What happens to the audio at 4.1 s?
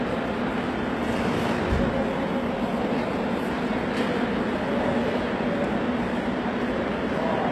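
At 4.1 s the audio carries the same damage heard across the whole clip. The treble sounds bright but artificial, with a gritty, metallic edge. Nothing is present above about 12.3 kHz. The likely cause is HE-AAC compression at a low bitrate, around 16 kbps. Only the lower spectrum is coded. The upper bands are rebuilt by copying lower content upward and shaping it coarsely. Its harmonics therefore fail to line up with the real ones.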